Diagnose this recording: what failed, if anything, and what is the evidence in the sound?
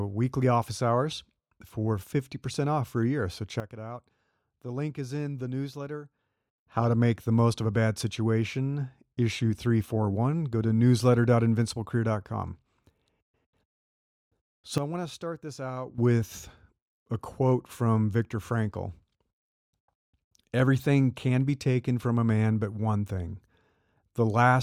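Sudden gain jump, 3.6 to 6.58 s and 14.78 to 15.98 s: speech and background noise fall together by about 12 dB at each onset and snap back at each end, likely a digital gain setting in the processing stage changed between samples without a ramp.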